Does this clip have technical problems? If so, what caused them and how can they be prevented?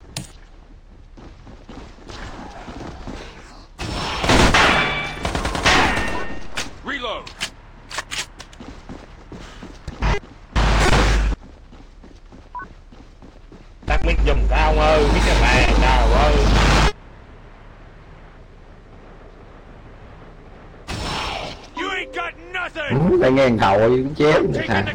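No, there are no technical problems to report here. Nothing in the audio points to a fault that would need a cause or a preventive step.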